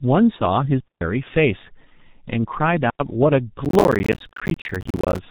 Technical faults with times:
0.00-5.30 G.723.1 codec
3.65-5.18 processor overload crackle

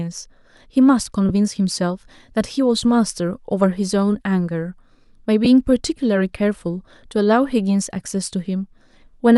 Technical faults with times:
1.29 lost LE Audio frames
5.45 lost LE Audio frames
8.79 lost LE Audio frames

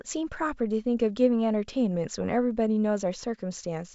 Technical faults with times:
none

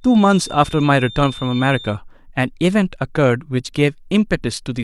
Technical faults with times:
0.00-2.00 feedback whistle

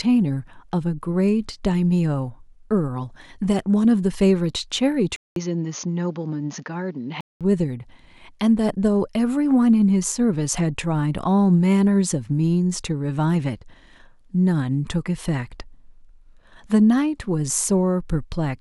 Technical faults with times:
5.16-7.41 input switched to a poorer device

